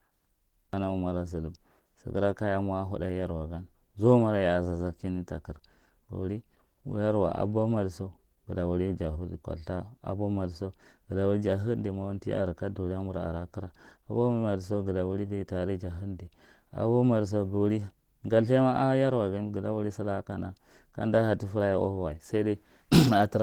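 Opus compression, heard from start to finish, is the likely cause of the plainly audible damage across this speech. The sound is muffled and hoarse, the character of the encoder's hybrid mode, which pairs a speech-oriented coder with band-energy coding when the bit budget is tight; that fits a rate around 16 kbps. Bandwidth stays full, with nothing above about 20.1 kHz.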